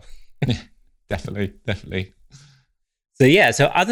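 All the way through, there's a faint 50 Hz buzz riding on the speech: the resampler restarted on every block. Each 20 ms chunk went from 24 kHz to 48 kHz with no memory of its neighbours, so every block edge gets a small error tick, only while sound is present.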